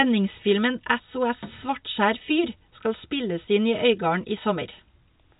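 Nothing stood out on listening to this telephone-band speech.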